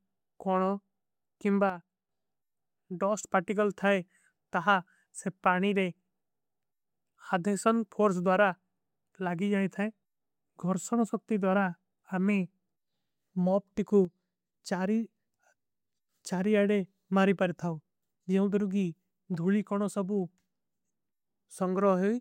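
At 1.70 s the speech and its background noise drop together by about 8 dB, then return at 2.09 s. The same happens from 14.05 to 14.54 s, this time about 6 dB down. Each step is instantaneous, with no fade in or out. This is a sudden gain jump, likely caused by a digital gain setting being applied from one sample to the next without a ramp.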